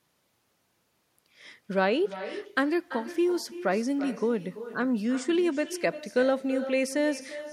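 Throughout the speech, an echo with no canceller is present: the far end's loudspeaker output is re-captured by its microphone and returned uncancelled. Each phrase is followed roughly a third of a second later by a thinner copy about 13 dB down.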